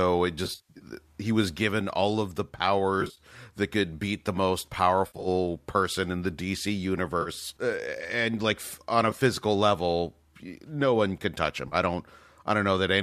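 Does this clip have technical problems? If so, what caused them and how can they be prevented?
Yes. AAC frame loss with concealment occurs at 0.45–0.86 s, 3.01–3.20 s, 5.07–5.28 s, 7.22–7.29 s, 9.11–9.21 s and 11.68–11.75 s. Runs of roughly 10 ms frames went missing, which points to the likely low-delay AAC stream. The decoder patched the gaps from the last good spectrum. The worst patch, near 0.45 s, has about 260 ms of loss scattered over 380 ms in bursts of up to about 70 ms, heard as smeared, noisy, phasey stretches. On a spectrogram these show as blurred, horizontally smeared blocks with noise filling between harmonics. The waveform shows flattened, slightly dipped envelopes. Prevent it by carrying the stream over a more reliable link with forward error correction or retransmission and a larger jitter buffer.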